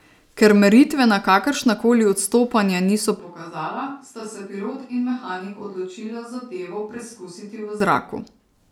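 From 3.19 to 7.80 s, after "kakršna koli odstopanja niso", the speech abruptly turns hollow and roomy and about 10 dB quieter, likely a switch to a distant microphone, not a plain gain drop.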